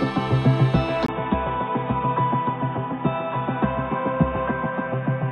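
At 1.06 s a gap of about 20 ms opens, then the sound turns dull and a few decibels quieter, with a faint new background hiss, which points to the input likely having switched to a poorer device. On a spectrogram, energy above 3.8 kHz vanishes until the end.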